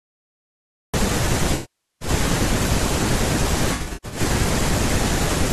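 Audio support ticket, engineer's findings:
Cut-off start, 0 to 0.94 s: digital silence, then speech enters abruptly mid-sound at 0.94 s with no natural attack or fade. Capture or stream began late, after the talker had already started. Probable component: recorder start trigger or stream join. Leading syllable truncated; any onset transient comes from the hard edge, not the source.

AAC frame loss with concealment, 1.54 to 2.09 s: about 0.47 s of lost audio, which fits a run of roughly 22 AAC frames. Decoder extends the last good spectrum, which smears and decays toward silence before fading back in. Probable component: transport or packet path feeding the AAC decoder.

AAC frame loss with concealment, 3.74 to 4.20 s: about 0.28 s lost, scattered over 0.38 s, longest gap around 100 ms. Short concealed patches sound smeared, noisy and phasey rather than fully dropping out. Same decoder path, intermittent loss.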